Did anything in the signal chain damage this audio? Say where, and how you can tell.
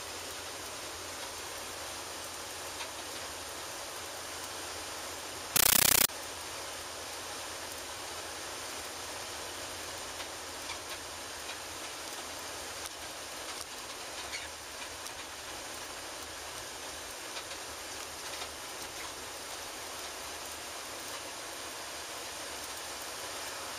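Yes, at the digital link: from 5.56 to 6.09 s, loud chattering static, 13 ms noise bursts 31 times a second, a compressed stream played as audio, which fits undecoded Dolby Digital.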